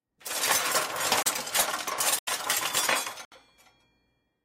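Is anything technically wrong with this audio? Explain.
Yes. The audio drops out three times: a brief hole at 1.23 to 1.26 s (about 33 ms), a longer one at 2.19 to 2.27 s (about 85 ms, which fits a 4096-sample buffer), and another at 3.25 to 3.32 s (about 68 ms). Each is a block of digital silence, where a run of samples was replaced by silence, typically because the output buffer wasn't filled in time, and the sound cuts out and back abruptly with no fade.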